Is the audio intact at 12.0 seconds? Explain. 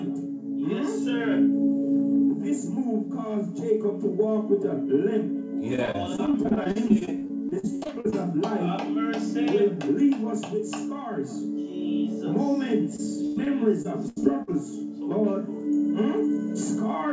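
Yes, the audio is intact at 12.0 seconds, with only the steady band limit of the call path's G.722 coding, which leaves nothing above 8 kHz.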